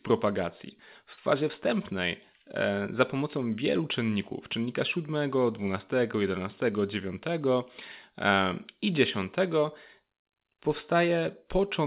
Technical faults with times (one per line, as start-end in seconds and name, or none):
1.13-1.20 short stall from a late packet